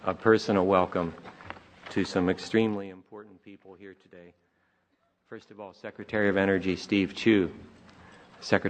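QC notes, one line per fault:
2.56–2.97 s and 5.76–6.27 s, zipper noise: the level drops by roughly 20 dB in the first span and rises by about the same in the second, but it moves in 1 dB jumps, around fifty per second, with no smoothing between them. Each jump puts a small discontinuity in the waveform, so a fast ticking, zipping texture rides on the sound while the level moves.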